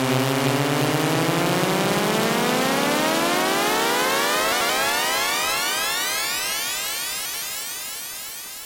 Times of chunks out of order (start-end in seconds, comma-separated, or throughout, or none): 4.52-4.69, 7.25-7.42